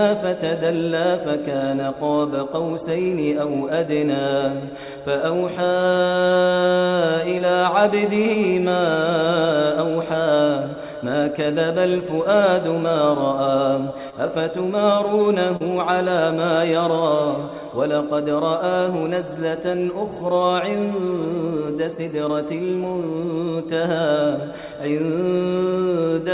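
Short concealed packet loss occurs three times: at 7.38 to 7.42 s, 14.10 to 14.14 s, and 15.56 to 15.62 s. Each time, a small piece of the stream arrived too late for the decoder, about 20 ms in the first two and 40 ms in the third. The receiver patched each gap by extending the preceding sound and then blending back. Each one is heard as a brief smear or wobble, longest at 15.56 s, over a band that stops at 4 kHz.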